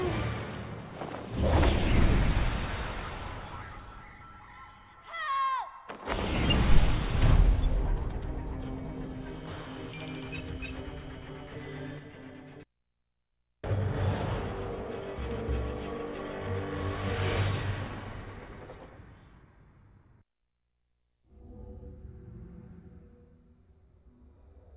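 Nothing technically wrong turns up anywhere in this audio, so there's no fault to pin to a time or trace back to a cause.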